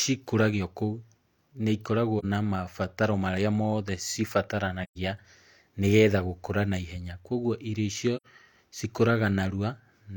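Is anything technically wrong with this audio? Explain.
Yes. The speech has three brief dropouts from AAC frame loss with muting. They fall at 2.19 to 2.25 s, just before "na mabataro marĩa mothe", at 4.83 to 4.98 s, and at 8.16 to 8.26 s. The losses are about 43, 128 and 85 ms, which fits one, three and two lost frames. The decoder zeroed the missing spectrum. Overlapping windows then faded the sound out and back in, leaving soft-edged holes.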